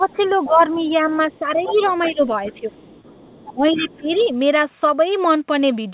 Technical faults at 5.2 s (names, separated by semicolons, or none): none